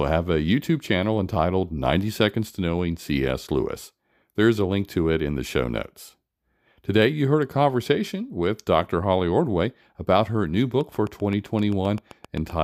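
A train of clicks runs from 10.81 to 12.51 s, just after "about her new": about fifteen near-identical pulses, evenly spaced at 7.7 per second and roughly as loud as the speech, tick through words and gaps alike, likely from interference or a faulty connection.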